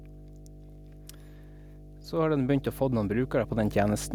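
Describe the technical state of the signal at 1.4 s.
Mains hum is present at 1.4 s and runs through the whole clip, so this moment is no exception. Power-line current is leaking into the signal path, most plausibly through a ground loop or a transformer sitting close to the cabling, and it lays a steady 50 Hz tone with a few low harmonics under the speech. The hum is strong, only a little quieter than the speech itself, so it sits as a constant, prominent drone beneath everything heard there.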